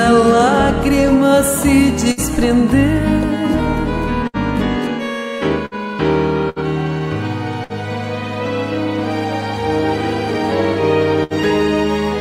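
Bursts of packet loss at 2.11, 4.27, 5.66, 6.49, 7.64 and 11.24 s: about 60 ms goes missing each time, bridged by a fading held buzz or hiss rather than dead silence, which marks it as concealed loss, not a plain dropout.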